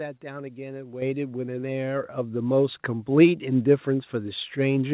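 Microphone volume stepped up at 1.02 s, again at 2.04 s and at 3.06 s. Each time the capture software judged the input too quiet and raised the device's input volume in a single step, so the speech and the background noise behind it jump louder together: by about 9 dB first, then about 5 dB, then about 3 dB. The three steps are evenly spaced and shrink as the level climbs. All of this sits within the call path's narrow band, with nothing above 4 kHz.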